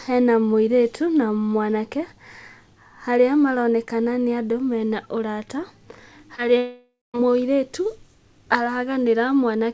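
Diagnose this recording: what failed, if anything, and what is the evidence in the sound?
Short concealed packet loss in the network and receiver stage, at 6.36 to 6.40 s. About 20 ms of speech arrived too late and was bridged by extending the preceding sound before blending back in. It is a brief smear rather than a gap, which separates it from a dropout.

A long network dropout, likely, from 6.58 to 7.16 s. Roughly 0.56 s never arrived. The decoder stretched the last sound into a fading buzz or hiss, with about 0.2 s of silence before speech resumes mid-flow. It is too long to be concealment jitter, and the missing material rules out a natural pause. The G.722 band limit at 8 kHz stays unchanged throughout.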